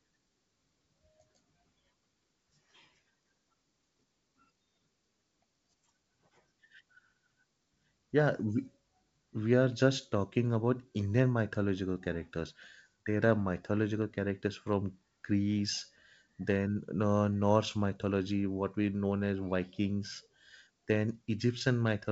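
Nothing stood out on listening to this speech clip, which comes across as ordinary G.722 wideband telephone audio.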